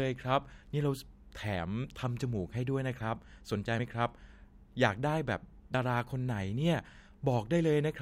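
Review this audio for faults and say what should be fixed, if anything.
Audio missing between chunks at 5.74 s: a short skip where the two sides butt together without silence. It is likely caused by the recorder losing roughly 50 ms while closing one 2-second chunk and opening the next. Overlapping or double-buffering chunk handoffs would prevent it.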